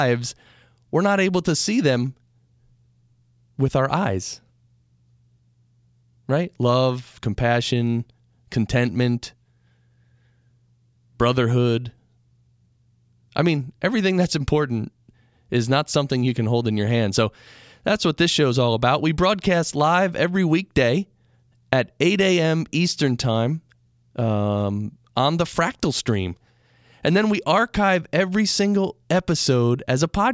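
No technical faults can be heard anywhere in the recording.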